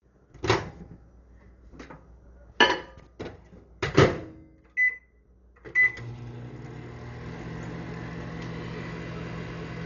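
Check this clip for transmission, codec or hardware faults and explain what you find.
One codec fault runs through the whole clip: heavy damage that likely comes from Dolby Digital compression. The audio stops at about 6.9 kHz, which points to a very low bitrate near 40 kbps. Starved of bits, the encoder narrowed the band and left many frequency lines empty, and the decoder filled them with noise. The result sounds dull, with rough, fluttering grain around tonal parts.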